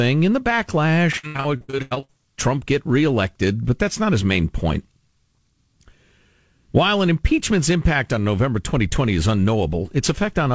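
Speech clip with repeated packet loss (robotic sound) from 1.12 to 2.10 s: over a dozen dropouts, the longest 85 ms, with about half of that stretch patched by stretching the previous sound. It sounds choppy, with smeared, repeated spectrogram frames and stepped waveform envelopes. The call path's band limit shows as an empty spectrogram above 8 kHz, which fits G.722.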